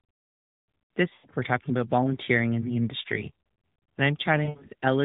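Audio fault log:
1.14–1.27 s, lost AMR speech frames: about 100 ms of sound just before "we're talking" smears and fades as the decoder repeats the last good frame's pitch and vocal-tract settings at falling gain. This fits roughly five 20 ms frames.
4.44–4.69 s, lost AMR speech frames: about 160 ms of concealment is scattered across 240 ms, with the longest run 60 ms, giving repeated brief warbles and dips. The 12.2 kbps AMR-NB band limit stays audible around them.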